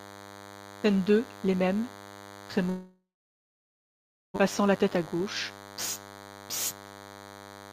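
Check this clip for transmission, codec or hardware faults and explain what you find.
Four faults affect this speech clip: a cordless-phone interference buzz, a long network dropout, and two jitter buffer speed-ups.

DECT cordless phone buzz runs throughout. A nearby DECT handset or base transmits a radio burst every 10 ms, and the audio circuitry rectifies it. The result is a thin, steady buzz at 100 Hz, rich in harmonics, sitting around 20 dB below the speech.

A long network dropout runs from 2.69 to 4.38 s. Incoming audio stopped, most likely because of a network interruption, and the receiver filled the gap for about 1.67 s. About 1.2 s of audio is lost outright. The last sound decays into roughly 1.28 s of silence, and the speech resumes further along with a jump in delay of several hundred milliseconds.

Jitter buffer speed-ups occur twice, from 4.6 to 5.65 s and from 6.07 to 7.61 s. 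The buffer held more audio than it aims for, so the receiver repeatedly cut out short pitch-period pieces. The first stretch plays about 8% faster and removes about a tenth of a second. The second plays about 23% faster and removes about 0.4 s. In both, the speech sounds rushed while the pitch stays unchanged.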